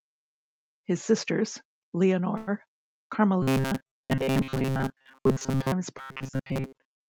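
Speech passed through an Opus call path band-limited to 8 kHz shows a short stall from a late packet at 2.37 to 2.49 s, where the sound is held for 100 ms until the delayed packet arrives, then resumes with nothing lost. Robotic sound from repeated short buffers runs from 3.42 to 5.72 s and from 5.98 s to the end, a rigid metallic buzz at 133 Hz over most of the audio, likely from the receiver repeating about 7.5 ms segments while the real signal is skipped.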